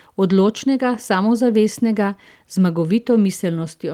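Listening to this speech recording, nothing technically amiss stood out at any point.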